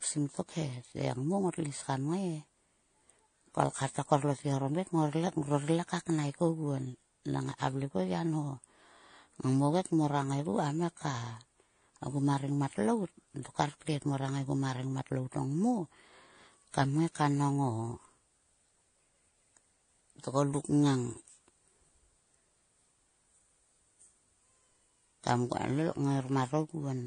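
Throughout, the speech was likely transcoded between lossy codecs, fitting low-bitrate AAC then MP3. Nothing remains above 9.8 kHz, and two layers of smeared, warbling artefacts overlap.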